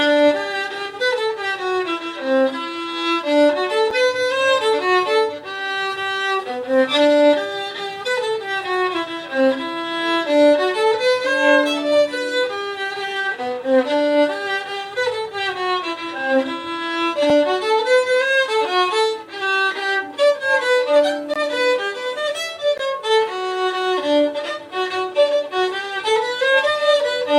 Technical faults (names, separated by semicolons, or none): block of digital silence